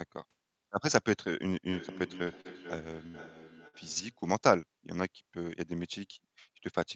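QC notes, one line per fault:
1.72–4.27 s: feedback echo between two devices. The sound returns at about half-second intervals, up to about 15 dB below the direct signal. A second device replays this microphone's sound, which is picked up again and missed by the local echo canceller.
2.23–2.30 s and 2.41–2.48 s: short concealed packet loss. Brief smears of about 34 and 40 ms where the receiver extended the preceding sound to cover audio that arrived too late.
2.27–2.29 s and 2.45–2.47 s: lost packet rebuilt from error correction. 20 ms stretches sound rougher and noisier because Opus decoded a low-bitrate copy carried in the following packet.
3.07–3.17 s and 3.68–3.76 s: burst of packet loss. About 69 and 55 ms of fading held sound replace 60 ms of missing audio each time, and playback then resumes further along.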